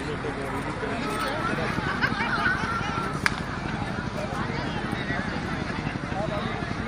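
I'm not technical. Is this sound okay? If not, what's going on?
No. There is a train of clicks from 1.45 s to 6.81 s: a steady ticking laid over the sound, about 12 clicks every second at an even pace, around seventy in all. They sit noticeably above the audio and carry on through quieter moments too. Each click is a short pulse of much the same shape pushed into the signal again and again, most likely from electrical interference by nearby equipment or a faulty connection or power supply.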